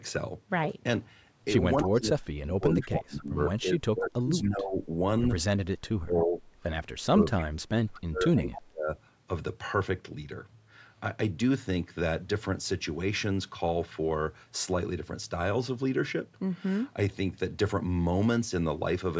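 From 1.76 to 3.42 s, and again at 3.59–4.99, 5.58–6.42 and 7.11–8.92 s, speech drops in pieces by up to about 40 dB. This is speech suppressed in double talk, likely from an echo canceller unable to separate its own talker from the loudspeaker echo. Echo leak appears at 1.82, 7.38 and 8.51 s as brief copies about 10–20 dB below the speech and 265 ms late, likely residual loudspeaker echo.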